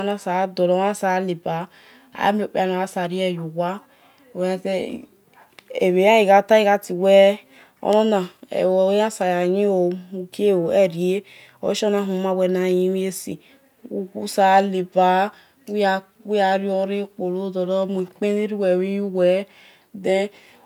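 No audible technical faults anywhere in this speech recording.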